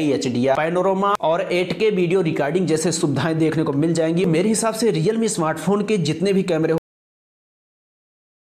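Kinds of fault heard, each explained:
Cut-off end: The final stretch of audio was never written out or played back, as though the last buffers were lost before they reached the output, so the recording ends abruptly rather than finishing. At 6.78 s the sound stops mid-event with no decay or fade. The level falls straight to digital silence, which then holds for the remaining 1.75 s to the end of the clip, leaving the last sound unfinished.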